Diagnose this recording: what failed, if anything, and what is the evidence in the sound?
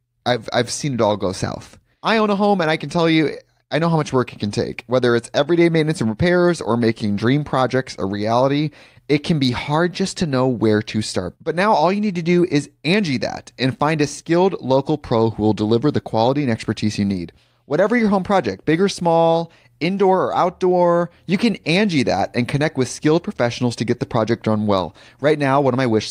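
Nothing failed: no stage from capture through playback leaves any audible trace in this speech recording.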